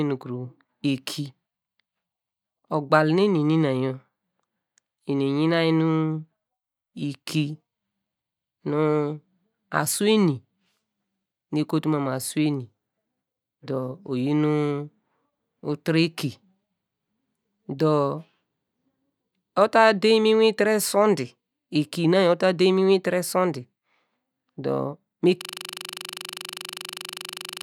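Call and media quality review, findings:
System hang loop from 25.41 s to end, right after "dor me": same 40 ms slice repeating at 25 Hz, a steady buzz. Driver or host froze, hardware kept cycling its ring buffer.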